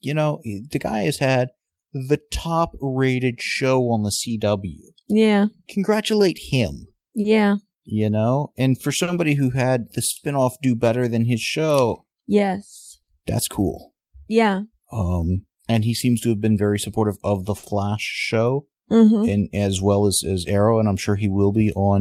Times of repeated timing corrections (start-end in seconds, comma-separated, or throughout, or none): 0.24-8.88, 11.21-21.83